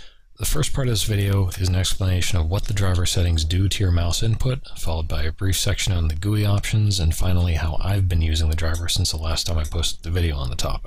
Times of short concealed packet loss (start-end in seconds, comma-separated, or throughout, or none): none